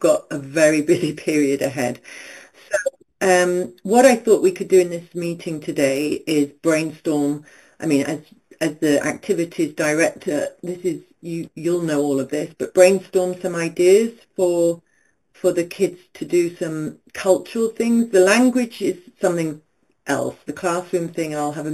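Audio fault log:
throughout, imaging from sample-and-hold upsampling: a bright, metallic fizz rides on top of the speech, rising and falling with every syllable and sitting about 17 dB below it. The first mirror copy of the spectrum lands between 4 and 8 kHz, which fits audio originally at 8 kHz being raised to 44.1 kHz by simply repeating samples without a smoothing filter. That folded band moves opposite to the pitch.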